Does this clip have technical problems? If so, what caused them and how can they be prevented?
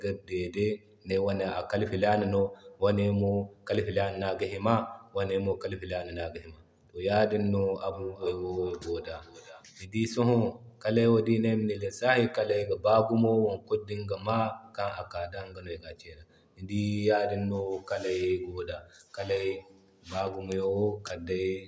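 Yes. From 7.93 to 9.7 s the speech comes back as a thin, ringing repeat at a steady interval of roughly 0.4 s, peaking about 17 dB below the direct speech. This is feedback echo between two devices: two devices in the same room joined the same call, one played the other's microphone signal through its speaker, and that microphone picked it up again. Each echo canceller removes only its own device's playback, so the loop passed through. To prevent it, only one device in the room should have its microphone and speaker active on the call.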